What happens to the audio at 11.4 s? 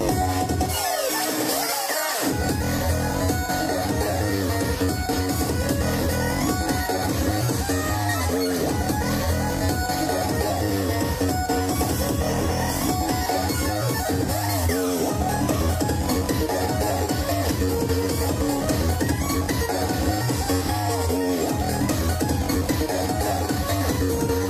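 Nothing goes wrong at 11.4 s; the audio plays through that moment intact, with no dropout, click or distortion.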